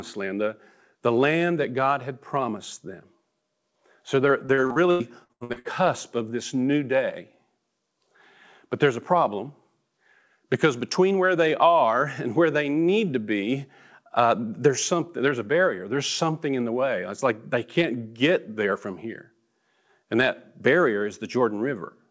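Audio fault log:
4.46–5.68 s: repeated packet loss (robotic sound). Ten holes up to 91 ms long, about 41% patched by repeating prior sound, giving choppy speech with pieces missing.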